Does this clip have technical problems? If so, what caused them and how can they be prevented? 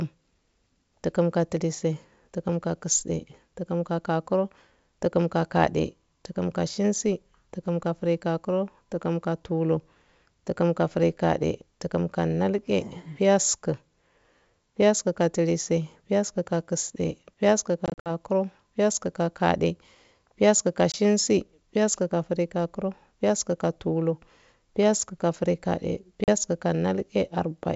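Yes: packet loss on an ADPCM call, with silent gaps at 17.86–18.10 s (140 ms scattered), 20.92 s after "piyasku ka" (20 ms) and 26.24–26.29 s (40 ms). Unlike plain dropouts, the speech returns slightly distorted while the decoder's predictor and step size resynchronise with the 64 kbit/s G.722 sender. Packet-loss concealment, forward error correction or a better-provisioned network path would prevent it.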